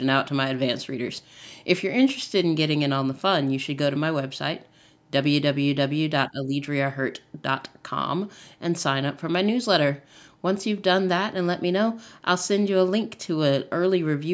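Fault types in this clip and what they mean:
Speech suppressed in double talk: between 6.29 and 6.53 s the speech sinks by about 15 dB for roughly a fifth of a second, likely because an echo canceller facing simultaneous talk from both ends could not tell near speech from loudspeaker echo and attenuated everything.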